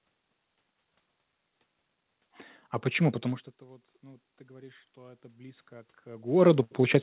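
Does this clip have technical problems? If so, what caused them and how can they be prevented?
Yes. From 3.22 s to the end there's automatic gain rising. The input dropped by about 24 dB as the talker moved back near 3 s, so the gain control gradually cranked up, swelling voice and room noise together. Keeping a steady mic distance, or capping the AGC's maximum gain, prevents it.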